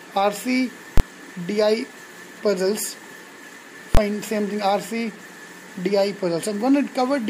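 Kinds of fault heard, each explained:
invalid numbers at full scale: two loud bangs near 0.98 and 3.95 s, each 23 ms long; a calculation produced invalid values, pinning the output flat at one extreme, which fits 1024-sample blocks.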